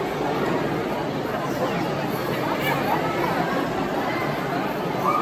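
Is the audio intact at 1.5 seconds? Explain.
No. At 1.5 seconds the crude rate conversion fault is just ending. It affects the audio from the start to 1.5 s. The sound suggests a change from 48 kHz to 44.1 kHz done by linear interpolation between samples with no anti-aliasing filter. The repeating interpolation error adds inharmonic tones at roughly 40 dB below the signal, heard as a faint gritty fizz that tracks the louder and brighter parts of the sound.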